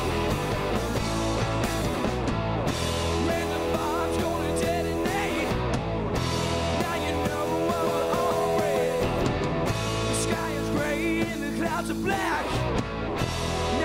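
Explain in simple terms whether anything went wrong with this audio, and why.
Between 7.83 and 9.73 seconds the audio has a doubled audio track: a second copy of the same sound runs roughly a fifth of a second behind the original, somewhat quieter, with no echo tail or room colour. It appears and disappears abruptly at those two times. The likely cause is the sound being captured a second time through a slower path, or an edit that left two copies out of step.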